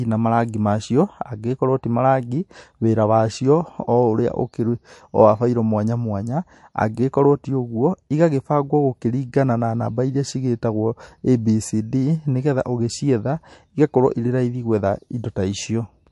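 From start to finish the speech carries MP3 compression damage that is plainly audible. Nothing reaches above about 11.3 kHz, so the top octave is gone. The texture is watery and swirly, with metallic chirps on s sounds and smeared consonant attacks. The likely cause is an MP3 encode at a low bitrate, near 53 kbps, where the encoder ran short of bits, cut the treble at a fixed point, and dropped weak frequency components that flicker on and off between frames.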